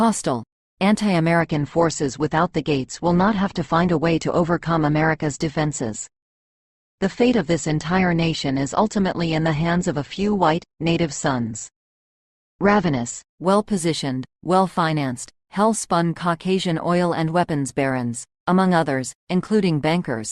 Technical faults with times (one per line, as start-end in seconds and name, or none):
1.40-13.40 adaptive stream at a lower bitrate